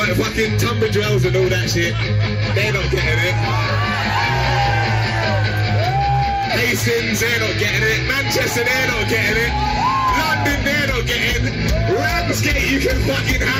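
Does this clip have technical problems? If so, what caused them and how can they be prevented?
Yes. DAB burbling at 12.48–12.51 s: residual bit errors from weak reception corrupt values in the MP2 audio data, putting short blips of noise in single sub-bands, heard as a few watery blips, which fits a single damaged frame. A spectrogram shows isolated bright rectangular blocks in narrow bands. Better reception (aerial placement, gain, or a stronger multiplex) reduces the bit errors that cause it.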